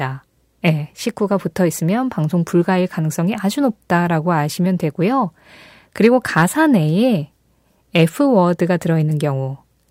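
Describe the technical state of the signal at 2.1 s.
At 2.1 s the speech signal is intact, with no audible technical fault at that moment.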